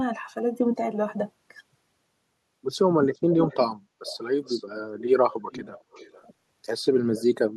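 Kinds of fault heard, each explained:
Echo leak: a copy of the speech returns about 0.4 s late, in scraps between 3.14 and 7.24 s, first nearly as loud as the original, then faint, likely from an echo canceller passing loudspeaker pickup back. Unlike reverberation, it is a separate repeat, not a smooth tail.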